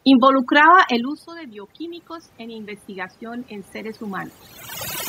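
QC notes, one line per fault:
Throughout, overdone noise removal: the background room noise has been pushed down and broken up, leaving twinkling specks where individual frequency bands flicker on and off. The reduction is set so aggressively that any band sitting close to its noise estimate gets cut hard, and the quieter components of the speech are caught along with the noise.
0.29 to 4.4 s, automatic gain rising: the voice and the residual background swell up together over several seconds, not in a sudden step. The input level drops by about 17 dB, in step with the talker moving back from the microphone around the one-second mark. The automatic gain control reads this as the signal going quiet and slowly raises its gain by about 10 dB to compensate, lifting everything at once, noise included. The talker's later shift near 4.5 s falls after this rise.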